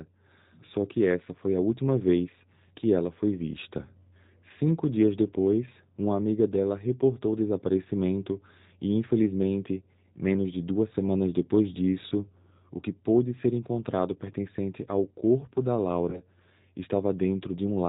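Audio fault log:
throughout, G.729 codec: the speech has nothing above 4 kHz and a rough, slightly synthetic grain. Each 10 ms frame is rebuilt from a vocal tract filter, a pitch predictor and a few pulses, which fits an 8 kbit/s G.729 coder. Unlike simple low-pass filtering, the roughness is in the voice itself, not just missing treble.
16.10 to 16.21 s, VoIP packet loss concealed by the speech codec: about 20 ms of audio is missing, which points to a single lost packet. Instead of a gap, the decoder stretches the last pitch and filter into a buzzy tone or coloured noise that fades. The voice then stays weak and smeared until about 16.21 s while following frames rebuild. Unlike a plain dropout, there is no silence or click.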